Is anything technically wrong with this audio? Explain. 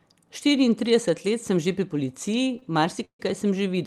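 Yes, there are two timing faults in this speech clip, both coming right after "sem že pri policiji".

From 2.59 to 2.63 s there is a short stall from a late packet. A packet arrived late and the jitter buffer ran dry, so the receiver held the last bit of sound for about 31 ms until the data turned up, then carried on from the same point. Nothing is lost, but the sound is briefly drawn out with a faint buzzy smear.

From 3.05 to 3.20 s there is a call audio freeze, likely caused by packets held up in transit until the jitter buffer emptied. Playback stops for about 145 ms. The receiver first extends the last sound as a fading buzz, then about 90 ms of that stretch is silence before the audio resumes where it left off. This inserts a gap rather than dropping material, and shifts the rest of the speech later.

The audio's bandwidth tops out around 12 kHz, consistent with an Opus-coded call path.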